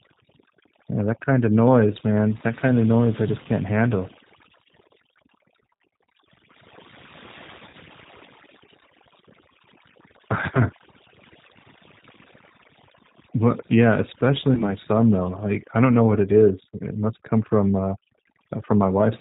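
Overdone noise removal runs throughout: aggressive spectral suppression leaves a near-silent background with twinkling specks. The G.729 codec damage is also constant and plainly audible. Nothing above 4 kHz survives, and the rough, synthetic rebuild fits an 8 kbit/s low-rate speech coder. VoIP packet loss concealed by the speech codec appears at 3.43–3.48 s, 7.69–7.75 s and 14.55–14.69 s. Each time the decoder extrapolates a fading buzzy tone or coloured noise, and the speech stays weakened briefly afterward. The gaps fit about 20, 40 and 20 ms of missing audio.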